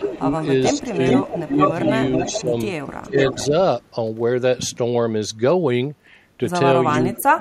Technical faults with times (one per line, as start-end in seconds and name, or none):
0.00-1.60 speech suppressed in double talk
0.42-3.47 echo leak
2.30-2.55 speech suppressed in double talk
3.09-3.52 speech suppressed in double talk
6.93-7.17 echo leak
7.02-7.40 speech suppressed in double talk